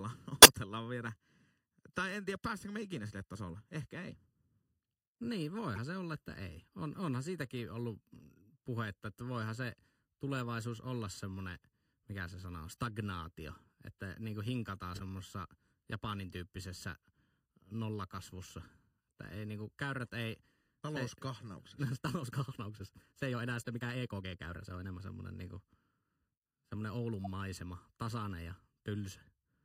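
Throughout, the speech sounds hollow and phasey. This is channel delay causing comb filtering. One channel lags the other by under a millisecond, and summing to mono cancels a series of evenly spaced frequencies. The first notch sits near 700 Hz.

At 0.42 to 0.50 s there is a loud burst, peaking around -10 dBFS. At 5.76 to 5.78 s and 14.94 to 15.01 s come fainter blips, near -35 dBFS. Each is a corrupt frame decoded anyway. Damaged data spread energy across the wrong frequencies for a few frames.

From 21.41 to 25.01 s the pace jumps to about 1.35 times normal, yet the pitch holds. It sounds rushed. The likely cause is a time-stretched section, squeezed by dropping short pieces of audio.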